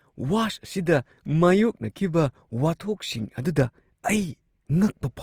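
Throughout, the speech sounds grainy, rough and noisy. Likely Opus compression, fitting about 24 kbps. Starved bands are filled with noise. Content reaches about 20 kHz.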